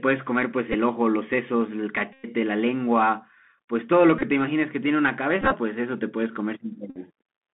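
Throughout the speech the Bluetooth CVSD headset codec limits the band to roughly 150 Hz to 3.4 kHz. Its one-bit, 64 kHz delta modulation cannot follow fast high-frequency swings, so sibilants turn scratchy and a granular hiss sits plainly under the voice.

Bluetooth headset packet repeats occur at 0.72 s, 2.13 to 2.28 s, 4.19 to 4.23 s, 5.41 to 5.56 s and 6.90 to 6.98 s. Lost packets were replaced by re-decoding the previous one. The 105 ms run at 2.13 s gives a steady buzz near 267 Hz. The scattered losses at 4.19 s and 5.41 s sound as broken buzzing.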